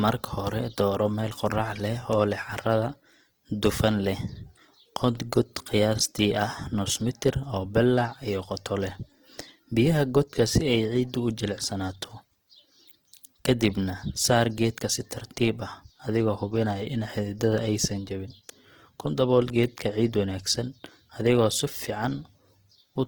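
The clip is speech carrying plainly audible Opus compression damage from start to finish. Detail is not lost to gaps or swirling; the band energy stays in place while the fine structure turns rough, grainy and noisy, as if the upper spectrum were rebuilt from substitute material. Content still reaches about 20.2 kHz, pointing to the fullband music (CELT) mode, and the degree of roughness fits a bitrate around 16 kbps, likely too little for this mode.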